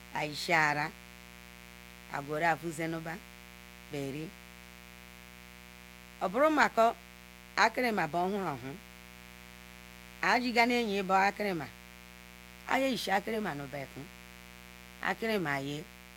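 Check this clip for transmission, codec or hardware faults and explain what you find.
One hardware fault runs through the whole speech clip: mains buzz. A steady, raspy buzz sits about 20 dB below the speech from start to finish. Unshielded wiring or a dimmer or rectifier lets sharp switching spikes in twice per 60 Hz cycle, spreading harmonics of 60 Hz up to several kHz.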